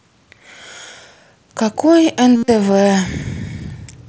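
From 2.36 to 2.48 s there is concealed Bluetooth headset packet loss. Most of that 120 ms stretch, about 105 ms, never arrived, and the longest unbroken gap is 67.5 ms. The receiver fills each gap by repeating the closest-matching recent fragment of the waveform. This gives a buzzy, held tone at steady level that warbles briefly as real audio resumes. On a waveform it appears as a flat-envelope periodic block. A spectrogram shows frozen horizontal harmonic stripes within the mSBC wideband band.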